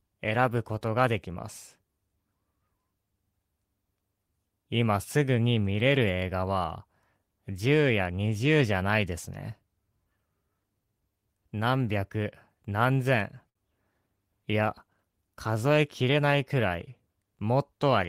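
At 13.49 to 13.57 s, a late packet left the jitter buffer empty, causing a short stall: about 59 ms of held speech, with a slight buzz or dip, with nothing lost afterwards. From 15.63 to 16.17 s, a jitter buffer speed-up trimmed pitch periods to shed about 50 ms of excess delay, so speech runs at 109% speed and sounds hurried without changing pitch.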